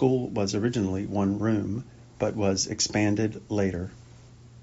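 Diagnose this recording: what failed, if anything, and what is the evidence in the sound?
Nothing failed in this recording.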